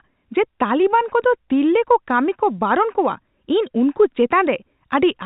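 No technical faults are audible.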